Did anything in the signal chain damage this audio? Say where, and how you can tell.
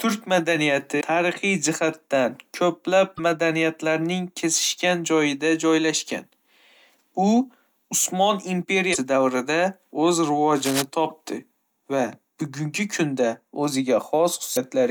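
Yes. Damaged data in a compressed stream shows up as brief chirps and blips at 0.97–1.02, 3.17–3.20, 8.92–8.96, 11.10–11.12 and 14.53–14.57 s. Corrupted bytes in the encoded file made the decoder misread frames, lose sync and jump to the next header.

Cable scratch noise at the analogue wiring stage appears at 10.55–10.83 s as a dense, uneven burst of scratchy rustling only a little below the speech level. It is likely a worn connector or cable being moved, with its contact resistance changing rapidly.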